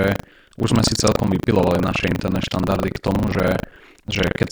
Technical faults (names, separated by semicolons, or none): buffer tearing